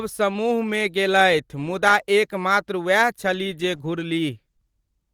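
Near the end, from 4.57 to 4.62 s, there's a short stall from a late packet: the jitter buffer ran dry, so the receiver held the last bit of speech for 18 ms and then carried on. Nothing's lost, just a brief drawn-out smear with a slight buzz or dip, and everything after lands 18 ms later.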